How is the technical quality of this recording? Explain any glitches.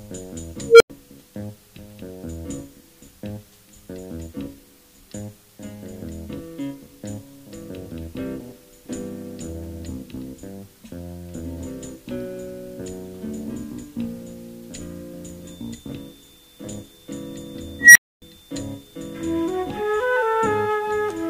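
Technical quality is compromised by three faults. At 0.66 to 0.90 s and 17.79 to 18.22 s, an unstable filter causes a tone near 500 Hz, then near 2 kHz, to swell over about 140 ms and 160 ms, clip, and drop to silence for 96 ms and 267 ms. From 15.37 s to the end, a thin, steady 3.6 kHz whistle sits about 25 dB below the sound, swelling and fading slowly in level. This is a feedback whistle, likely from a loudspeaker-to-microphone loop held just at the edge of feedback.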